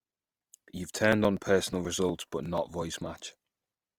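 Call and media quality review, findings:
Speech throughout. Rough, grainy texture across the whole clip, plainly audible. Likely cause: Opus compression, music (CELT) mode. Grain fits a bitrate near 24 kbps. Bands short of bits get filled with folded or noise content, so tones turn noisy and grainy rather than swirly. Fullband kept; content extends to about 20.2 kHz.

Periodic USB or driver dropouts, 1.13 to 3.91 s. Regular ticks every 0.121 s, about twenty in all. Each is a few milliseconds of audio skipped, not replaced by silence. The even spacing points to a background task stalling the USB bus or audio driver on a fixed cycle. Ticks are heard only where signal is present.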